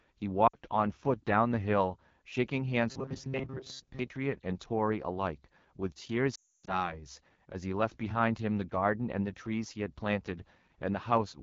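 The whole clip passes through the AMR wideband (HD Voice) codec at 8.85 kbit/s, one of its lowest rates, so the speech carries a plainly audible rough, raspy edge throughout.

From 0.47 to 0.57 s, lost AMR speech frames cost about 60 ms of audio, consistent with three 20 ms frames. The decoder reuses its last good settings at falling gain, so the sound drops to near silence within two frames.

Between 2.89 and 3.99 s, new audio likely arrives too seldom, so the playback repeats a short buffer of about 7.5 ms and skips most of the real audio. This is robotic sound from repeated short buffers: a rigid, metallic buzz near 134 Hz that still loosely tracks the speech.

From 6.35 to 6.96 s, more lost AMR speech frames remove about 300 ms across a 320 ms span, including one run of 280 ms. The sound drops to near silence within two frames, and returns weak or rough.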